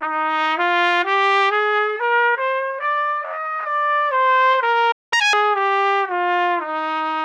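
At 4.91 s the sounds cut out in a playback stall, and the output stays silent until 5.13 s, a gap of about 200 ms. The likely cause is the player running short of buffered data or its audio thread being blocked.

From 5.13 s to 5.33 s the player makes up the lost time with catch-up at higher speed, resampling the backlog at twice normal rate. Events rush past and everything rises by roughly ten semitones, a chipmunk-like lift, before snapping back to normal pitch and pace. It differs from a plain pitch-shift fault because tempo and pitch climb together, and the burst lasts only as long as the silence before it.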